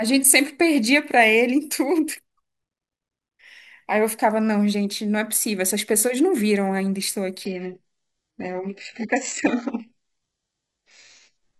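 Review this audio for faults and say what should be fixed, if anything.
From 7.45 s to the end, the speech suddenly loses everything above 8 kHz. This is an adaptive stream at a lower bitrate, which fits a drop to a very low HE-AAC rendition. Unlike a dropout, there is no gap. A larger playback buffer, or a floor on the lowest rendition, would keep brief network slowdowns from forcing this switch.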